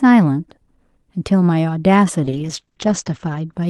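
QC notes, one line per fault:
2.25–3.59 s, call bitrate drop: the Opus stream falls to a much coarser rate, consistent with a drop from about 40 kbps to about 9 kbps, holding at its lowest for about 1.13 s. Coding turns rough and watery, and the audio band narrows from 12 kHz to 8 kHz, so speech sounds duller.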